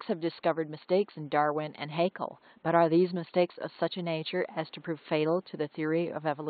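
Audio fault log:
Nothing stood out on listening to this speech clip, with only faint room noise sitting about 38 dB below the speech.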